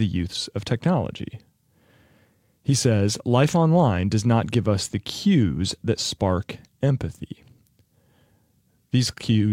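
No technical faults can be heard anywhere in the audio.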